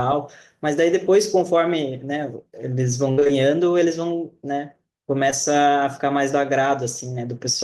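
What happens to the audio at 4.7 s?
Nothing goes wrong at 4.7 s; the speech carries straight through that moment with no dropout, click, distortion or other fault.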